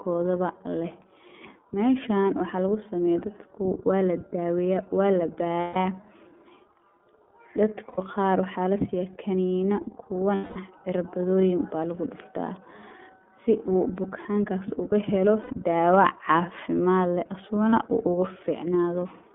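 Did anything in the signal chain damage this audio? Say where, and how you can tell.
Yes. At the codec stage, iLBC coding runs throughout. Speech is confined to 200 Hz–3.5 kHz and sounds rough and synthetic, which fits the 13.33 kbps mode.

At the network stage, lost iLBC frames leave gaps. They occur at 5.61 s after "waa ladaweeya waa la" (150 ms), at 7.88 s before "qaar waxaa lasiiya kaniina" (90 ms), at 10.35 s (210 ms), at 15.42 s (90 ms), and at 17.70 s between "cafimaad leh" and "uu ugu" (30 ms). Each gap is a held, slightly buzzy or breathy vowel. The decoder repeated the last pitch cycle with noise, and the speech recovers almost at once.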